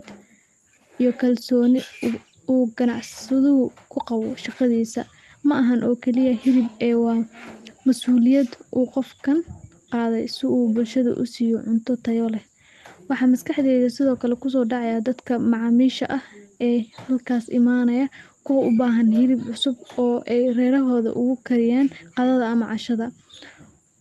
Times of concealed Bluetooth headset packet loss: none

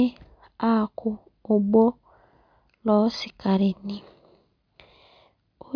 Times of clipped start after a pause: none

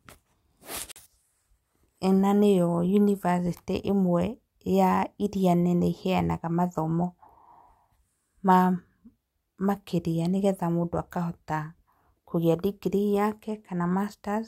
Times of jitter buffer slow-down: none

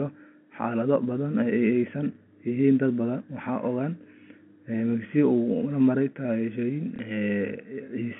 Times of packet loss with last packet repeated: 6.96-6.99

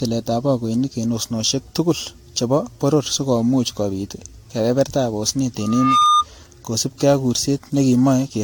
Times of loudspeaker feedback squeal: 5.60-6.25

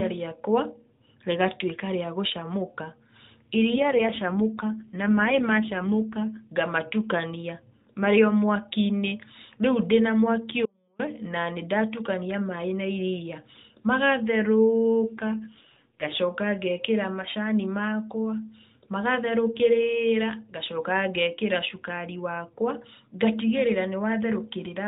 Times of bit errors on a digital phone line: none

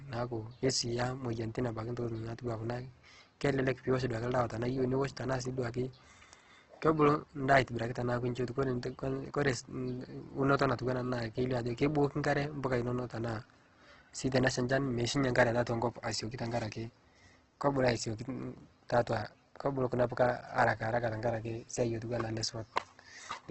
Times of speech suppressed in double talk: none

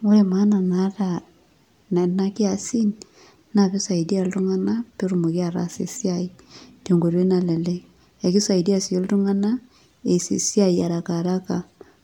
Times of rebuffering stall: none

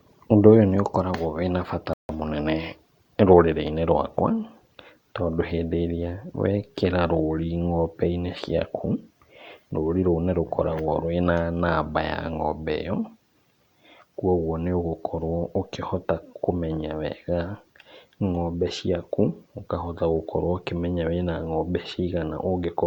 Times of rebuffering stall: 1.93-2.09

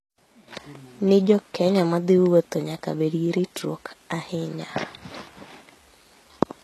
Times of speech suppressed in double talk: none

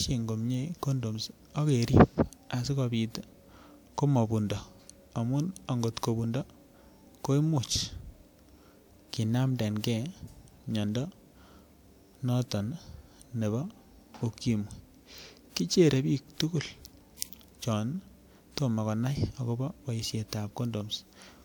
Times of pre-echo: 17.17-17.22

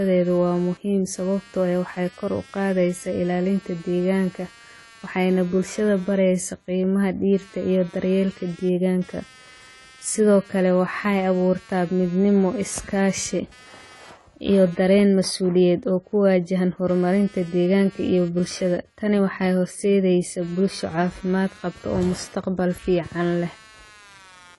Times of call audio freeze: none

